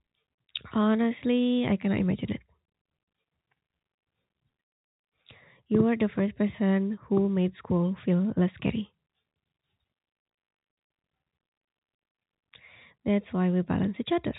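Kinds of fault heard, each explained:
No faults are heard in this speech. It comes through the G.711 telephone path, which stops everything above 4 kHz and leaves only a faint hiss that rises and falls with the level.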